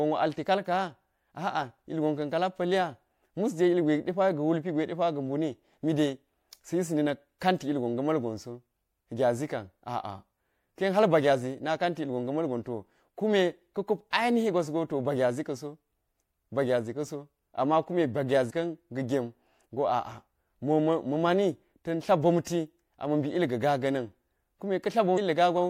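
At 18.49 s, damaged data in a compressed stream: a short run of corrupted bytes makes the decoder misread the frame there, lose sync and hunt for the next valid header. In this speech it comes out as a brief glitch.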